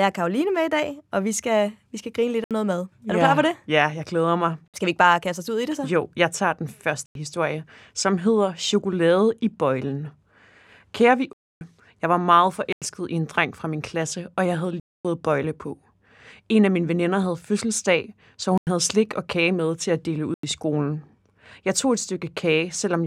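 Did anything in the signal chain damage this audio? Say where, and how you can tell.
Yes, at the driver or buffer stage: blocks of digital silence at 2.44, 4.68, 7.06, 11.33, 12.73, 14.80, 18.58 and 20.34 s, lasting 59 to 279 ms. The output buffer likely wasn't filled in time, and the repeated 93 ms holes fit a 4096-sample buffer.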